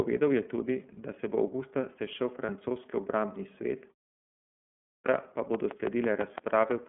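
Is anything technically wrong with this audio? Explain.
Yes, there are four faults.

Throughout, the audio carries the sound of the iLBC codec. The speech sits in a narrow telephone band of roughly 150 Hz to 3.4 kHz, with nothing on top, and has a plainly audible rough, slightly synthetic grain. That comes from the codec modelling each frame's excitation on its own at low rate. The character fits iLBC's 13.33 kbps mode with 30 ms frames.

At 2.45 to 2.50 s, just after "se bo avgusta sešel" and before "obrambni svet", there are lost iLBC frames. A single gap of about 30 ms, consistent with one dropped frame, is filled by the decoder repeating the last pitch cycle with added noise. It comes out as a brief held, faintly buzzy sound. Because iLBC frames decode independently, the speech is clean again immediately afterwards.

From 4.45 to 5.06 s, after "obrambni svet" and a pause of about 0.6 s, there is a clipped start after a pause. 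The output path went idle during the silence and took time to come back. About 0.61 s of the returning speech is swallowed, so the next phrase begins abruptly, missing its opening sounds.

From 5.55 to 6.72 s there is a train of clicks. About seven similar sharp ticks arrive at a regular 6 per second and peak about 15 dB above the speech level, so they stand out clearly over it. Similar pulses at such a steady rate most likely come from electrical interference or a faulty connection or power supply injecting a periodic transient into the signal chain.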